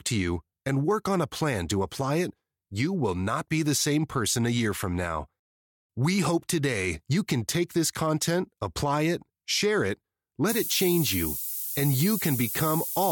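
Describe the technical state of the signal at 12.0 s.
At 12.0 s the signal is in a stretch of low bit depth with noise shaping that runs from 10.50 s, right after "apply it share it", to the end of the clip at 13.11 s. The speech is carried by only 4 bits, and the rounding error is fed back so the quantisation noise is pushed upward in frequency. It sounds like a steady, thin hiss that climbs sharply toward the top of the band, sitting only a few decibels below the speech itself.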